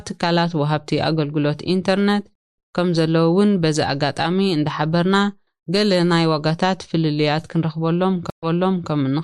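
Twice the connection drops and the player reconnects, starting a fresh decoder mid-stream, a stream reconnect each time. At 2.35 s the speech cuts to silence for 227 ms, and when it returns at 2.58 s roughly 150 ms of speech has been skipped. At 8.3 s a 126 ms gap opens, but here the server resends from 480 ms earlier, so after the silence about half a second of speech is heard again.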